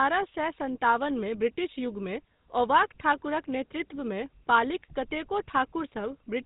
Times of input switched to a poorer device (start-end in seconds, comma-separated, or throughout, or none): none